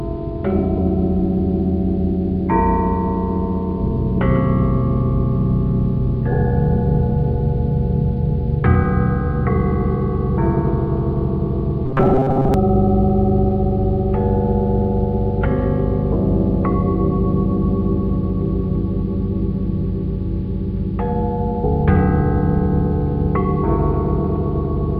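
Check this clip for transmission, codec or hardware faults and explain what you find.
One fault stands out. From 11.86 to 12.54 s, robotic sound from repeated short buffers: a rigid metallic buzz near 133 Hz, likely from a 7.5 ms buffer replayed for about half the audio.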